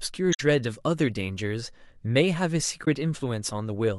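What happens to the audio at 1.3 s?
Nothing goes wrong at 1.3 s; the speech runs on cleanly through that moment with no dropout, glitch or distortion.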